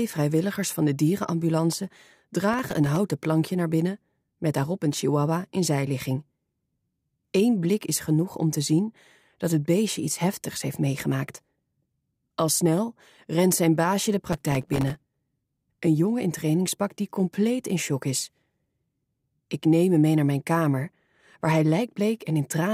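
Processor overload crackle occurs twice, from 2.53 to 2.96 s and again from 14.29 to 14.97 s. In each burst the processor misses dozens of deadlines for very short buffers, around a millisecond and a half each, and every miss drops to silence with hard edges. The result is a gritty, tearing crackle over the sound. On a waveform, each burst shows a rapid comb of tiny flat gaps. A spectrogram shows dense vertical broadband streaks across the whole range.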